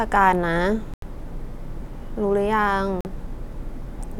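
At 0.94 s the speech cuts to silence for about 0.1 s, then again at 3.01 s for about 0.06 s. Speech resumes further on, as if it kept playing. This is likely a Bluetooth dropout, with late packets discarded.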